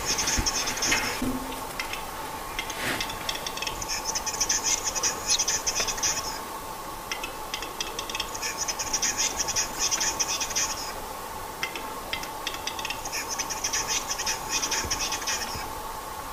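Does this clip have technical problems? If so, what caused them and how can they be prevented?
Yes: corrupt frames were decoded at 4.31–4.41 s, 5.30–5.37 s and 9.72–9.81 s, each spanning a few frames. Flipped bits produced wrong gains and codes, heard as chirpy bursts and seen on a spectrogram as misplaced rectangular blocks of energy. Checksums with concealment of damaged frames prevent this.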